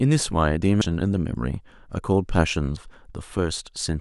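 At about 0.8 s and again at 2.8 s the speech hits a brief glitch, the mark of damaged data in a compressed stream. Corrupted bytes at those points trip the decoder, which loses frame sync and hunts for the next header before recovering.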